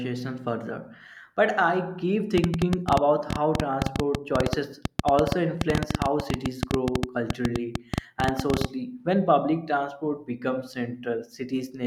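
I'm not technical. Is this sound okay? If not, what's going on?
No. Right after "further but I keep", at 2.38 seconds, a train of clicks starts and runs until 8.66 seconds. It sounds like fast, uneven ticking laid over the speech, and it continues through the pauses too. There are about ten clicks a second, around seventy in all, and they are quite loud. The cause is likely electrical interference from nearby equipment or a faulty connection or power supply adding pulses to the recording.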